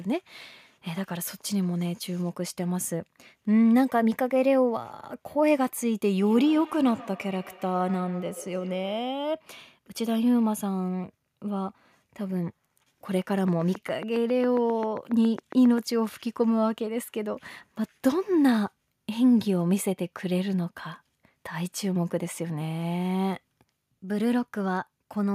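From 6.21 to 9.16 s, a feedback echo between two devices turns up: a second device on the call replays this microphone's sound, which is picked up again. Each phrase returns about a tenth of a second later, up to about 19 dB below the speech. The fixed spacing of the distinct repeats sets it apart from a room's smooth reverberant tail.

Between 13.48 and 15.79 s, a train of clicks ticks over the sound: around twenty near-identical pulses at a regular 7.39 per second, peaking roughly 5 dB above the signal. The likely cause is interference or a faulty connection or power supply. Unlike dropouts, the sound underneath continues and the ticking persists in pauses.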